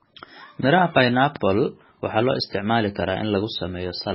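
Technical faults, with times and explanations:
Throughout: MP3 compression, likely at a very low bitrate, consistent with about 16 kbps, starves the encoder, so everything above 5.6 kHz is cut and weak bands flicker on and off, giving a watery, swirly speech sound. A spectrogram shows a hard ceiling and patchy, blocky holes below it.
1.36–1.38 s: loud pop, a single sharp click standing well above the speech while it carries on underneath, likely from a sudden voltage step such as a switch or static discharge. The waveform shows a brief spike; a spectrogram shows a thin full-height vertical stripe.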